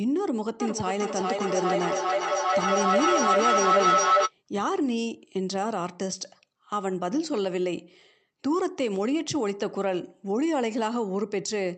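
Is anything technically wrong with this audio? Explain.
Yes. Feedback howl, 0.6 to 4.33 s: sound from a loudspeaker re-enters a microphone in the same room and gains level each trip, so repeats swell instead of fading, narrowing to a tone around 1.5 kHz, with the loop repeating roughly every 0.4 s, and peaks about 5 dB above the speech.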